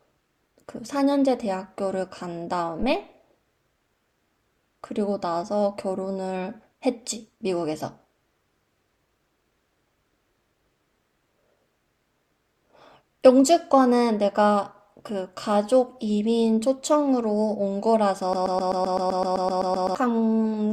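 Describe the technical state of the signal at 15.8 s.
At 15.8 s the audio is intact, with no fault audible at that moment.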